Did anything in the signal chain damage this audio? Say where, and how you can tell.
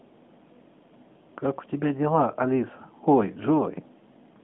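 No, nothing in the chain has damaged this speech. The narrowband mobile codec path can be heard working as designed: the sound sits in a telephone band from about 150 Hz to 3.6 kHz, with nothing above about 3.8 kHz, which fits AMR-NB at its top 12.2 kbps mode.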